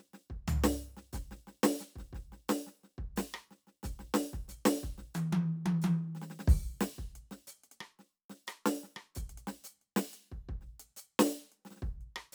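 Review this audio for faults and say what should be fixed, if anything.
No faults found; nothing needs fixing.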